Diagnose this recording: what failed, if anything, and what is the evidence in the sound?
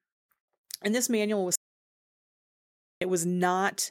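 Audio dropout to silence from 1.56 to 3.01 s: speech cuts off into silence, no room tone, for about 1.46 s, likely an input link or device loss.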